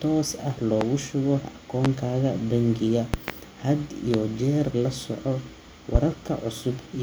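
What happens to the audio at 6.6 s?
Nothing goes wrong at 6.6 s; the speech carries on intact through that moment, with no dropout, click, distortion or other fault.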